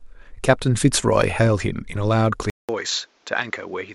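Speech, with a sudden change in sound at 2.5 s. A gap of about 0.19 s opens there. When the sound returns, it is duller and boxier, with nothing above 7.6 kHz. It is also roughly 10 dB quieter, with a new background noise around 35 dB below it. This change lasts to the end. The likely cause is the input switched to a poorer device, such as another microphone or a headset's call profile.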